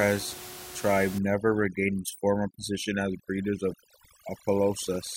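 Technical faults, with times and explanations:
1.19 to 5.16 s: overdone noise removal. From here to the end, the noise reduction is clamping down far too hard. Any frequency band that sits close to its guess at the noise gets pulled right down or switched off, and the quieter parts of the speech get caught with it. So the room noise, sitting about 15 dB under the speech, turns into near silence with little twinkling specks.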